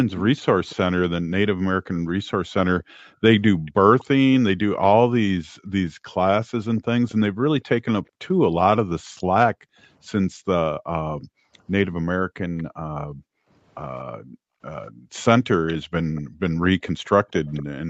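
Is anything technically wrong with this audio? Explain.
Yes. Echo leak at 0.17–0.75, 2.81–4.05, 6.77–7.14 and 12.57–17.63 s: a faint copy of the speech trails about 235 ms behind, about 15 to 25 dB down, likely from a loudspeaker echo canceller letting residue through. Background gated by the echo canceller at 2.83–3.65 s (about 0.2 s in total) and from 5.4 s to the end: the canceller clamps the microphone, so the room sound drops by up to about 40 dB.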